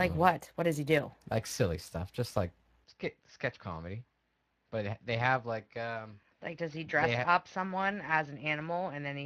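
Throughout the clip the speech has passed through the Speex codec, a CELP coder that rebuilds the voice from a coarse excitation and a spectral envelope. The damage is plainly audible, even though the sound points to a fairly generous setting of around 22 kbps. Too few bits reach the excitation, so the voice has a hoarse, noisy grain.

At 2.84 s, just after "silly stuff just like", the input likely switched to a poorer device and stays on it to the end. There is no gap at the change. The band now stops at 6.2 kHz, so the speech turns duller and boxier in an instant. The level falls by roughly 5 dB. A faint new background noise also comes in, sitting far below the voice.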